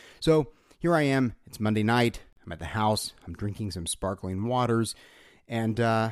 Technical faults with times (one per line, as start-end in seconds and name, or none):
2.33-2.37 gap at a join of encoded pieces